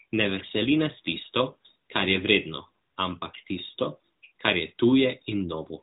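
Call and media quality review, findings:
Nothing to log on this speech clip: it's carried over the AMR narrowband mobile codec at 12.2 kbps, so the band stops around 3.8 kHz as expected for that path, and that's simply how the call is delivered.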